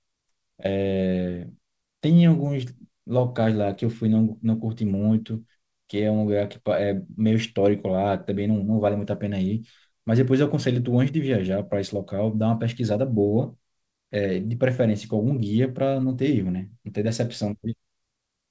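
No technical faults can be heard in this speech.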